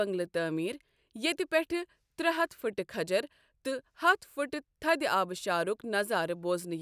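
No technical faults are audible anywhere in this speech.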